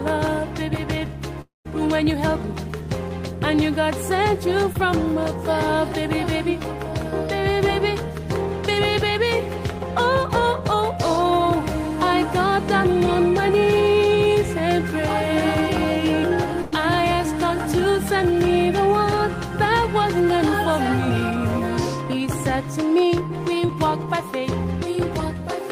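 Around 1.41 to 1.67 s the sound carries on as a fading continuation of what came before, then drops to silence for about 160 ms before resuming further on, a quarter of a second lost. That is likely a long network dropout: the gap outlasts what the receiver can mask, so silence follows the fade. Short concealed packet loss shows up at 4.73 to 4.77 s, 6.63 to 6.66 s and 23.66 to 23.70 s. About 20 ms is missing each time, patched by extending the preceding sound and blending back in, leaving a brief smear or wobble. At 16.62 to 16.74 s a burst of packet loss removes about 100 ms. The last sound is held and steadily turned down, a fading buzz or hiss, then the audio picks up further along. It is longer than the smears.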